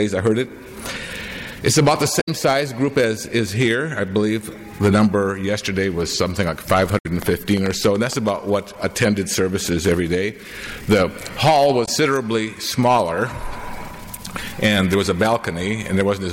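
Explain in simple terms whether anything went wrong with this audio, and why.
Damaged data in a compressed stream: the decoder stumbles over bad chunks and skips ahead, making brief glitches at 2.17–2.29 s, 6.95–7.06 s and 11.82–11.88 s.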